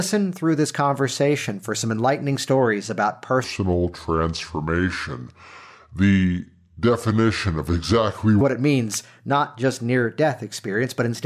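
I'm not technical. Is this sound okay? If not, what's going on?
No. From about 3.44 to 8.41 seconds, right after "some enlightening stories about" and until "what it means not", the speech turns slow and deep. That's a wrong sample rate problem: the audio is being played back slower than it was recorded, without any fix-up, so speed and pitch drop together. It runs at roughly three-quarters speed, and the pitch falls about five and a half semitones, which fits audio made at 44.1 kHz being played at 32 kHz.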